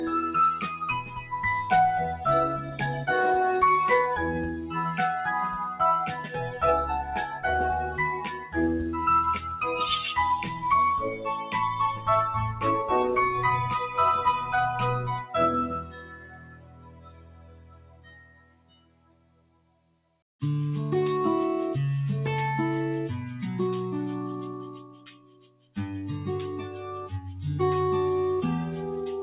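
A noise suppressor built for speech runs on this sound throughout, treating steady tones and tails as noise, so level swings by roughly 20 dB and pumps rather than dropping out. Stronger cuts by the noise suppressor sink held or fading sound while onsets survive, unlike true dropouts: 0.74 to 1.35 s (about 11 dB), 2.14 to 3.08 s (about 10 dB), 4.32 to 4.77 s (about 8 dB), 6.07 to 8.57 s (about 13 dB), 10.43 to 12.63 s (about 9 dB), 13.88 to 20.22 s (deepest, about 16 dB, for roughly five seconds), and 25.32 to 25.6 s (about 15 dB). Through all of it, nothing reaches above 4 kHz, which fits a 64 kbps G.711 call path.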